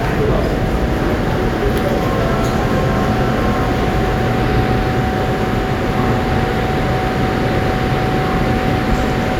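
A recording of sounds, with no technical fault audible anywhere in it. Nothing in the signal calls for a time or a cause.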